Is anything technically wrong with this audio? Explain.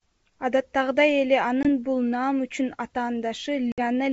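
Yes. Packet loss on an ADPCM call occurs twice in this speech, at 1.63–1.68 s (20 ms lost, a couple of packets) and 3.72–3.81 s (60 ms, several packets). Each gap is a hard-edged silence. The decoder's predictor and step size then mistrack, so speech resumes with brief distortion.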